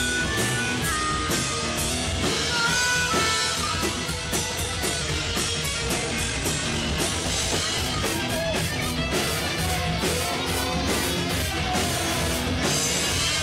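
Drift correction steps at 0.92 to 1.90 s, 5.02 to 7.06 s and 10.39 to 11.39 s detune the audio. The first two drop playback speed by 6.43% and pitch by 115 cents, and the third raises them by 6.43% and 108 cents. Each step likely comes from clock-matching software jumping its rate to rebalance a buffer. A time-stretched section from 3.53 to 8.98 s runs at 1.74 times the pace while holding pitch, so it sounds rushed, likely because software dropped short pieces to squeeze the section into a shorter length.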